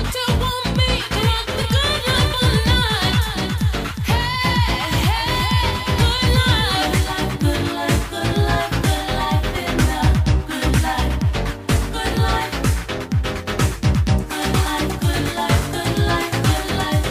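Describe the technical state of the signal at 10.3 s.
At 10.3 s the signal is intact, with no audible technical fault.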